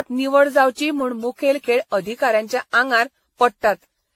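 Throughout the speech, the sound is swirly, smeared and hollow, with blurred consonant attacks and nothing above 16.6 kHz. This is likely generation loss: around ten successive lossy re-encodes, fitting AAC near 64 kbit/s, each stacking fresh quantisation noise and spectral holes.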